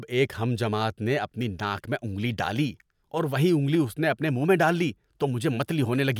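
A speech recording with no audible technical faults.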